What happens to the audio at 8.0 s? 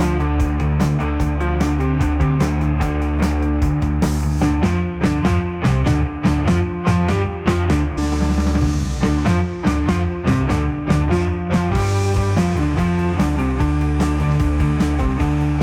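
At about 7.97 s the audio jumps abruptly ahead with a brief blip, dropping a chunk of programme: likely a stream segment skipped when it failed to load.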